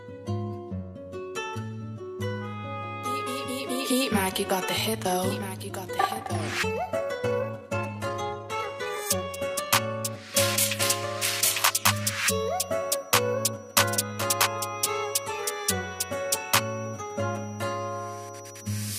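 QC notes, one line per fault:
4.21–9.75 s, time-stretched section: the pace jumps to about 1.37 times normal while pitch holds steady, so this stretch sounds rushed. It was likely squeezed by software that kept pitch by dropping short slices of audio to shorten the passage.
11.46–18.99 s, feedback whistle: a thin, steady tone at 5.8 kHz sits roughly 25 dB under the sound and swells and fades slowly in level through to the end. This is likely a loudspeaker-to-microphone loop held just at the edge of feedback.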